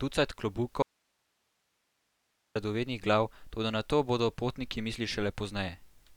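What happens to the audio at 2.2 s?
An audio dropout to a faint residue covers 2.2 s, running from 0.82 s to 2.56 s, about 1.73 s in all. The speech cuts off abruptly, not fading like a natural pause, and the gap holds only a low hiss, roughly 50 dB below the speech. The likely cause is a loss of the incoming signal while the downstream path stayed live, passing its own noise floor. Speech returns just as abruptly with "radovednih glav toda na".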